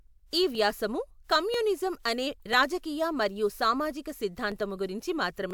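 From 0.55 s to 5.51 s the speech carries a click roughly every 0.99 s, about seven in all. That steady spacing sounds like clock drift buffer slips, likely from two devices whose clocks disagree by several hundred ppm, so a few dozen samples get dropped or repeated each time.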